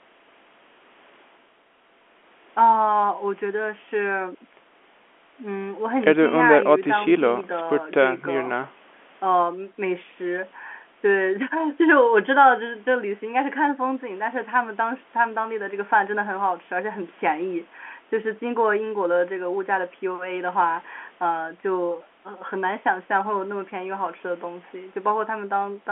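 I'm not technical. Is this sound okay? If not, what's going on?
Yes, nothing here sounds wrong; it's ordinary telephone speech.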